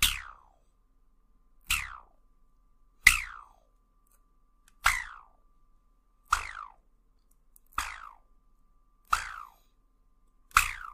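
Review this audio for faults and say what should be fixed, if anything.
Overlap between stream segments at 7.18 s: about 12 ms of audio is cut away where two segments' time stamps overlap, so the waveform jumps forward and a small click or skip is heard. The spacing fits segments about 4 s long. Unlike a dropout, no silence is inserted; material simply goes missing. To prevent it, the segmenter should assign contiguous, non-overlapping time stamps, or the player should trim only genuinely duplicated samples.

Sample clock jitter from 8.03 s to the end: the converter's clock wanders by a few microseconds, so samples land slightly early or late. The error scales with how steeply the waveform moves, producing a roughness roughly 20 dB below the signal. Unlike steady hiss or quantisation noise, it grows on loud, bright passages and disappears in silence. To prevent it, the converter should run from a stable, low-jitter clock source.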